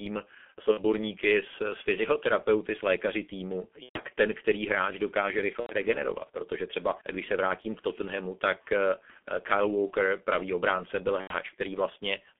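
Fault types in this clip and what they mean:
G.723.1 codec, throughout: this low-rate telephony coder, heavily damaging here at what sounds like its 6.3 kbit/s mode, confines the speech to roughly 200 Hz–3.4 kHz and models the voice coarsely in 30 ms frames, leaving it muffled, hoarse and with smeared consonants.
VoIP packet loss concealed by the speech codec, at 0.71–0.82, 3.83–4.00, 5.60–5.73 and 11.21–11.36 s: gaps of roughly 60 to 120 ms were filled by the decoder extending its last pitch and filter at falling gain, so the speech turns into a buzzy tone or coloured noise and fades, then stays weak briefly afterwards.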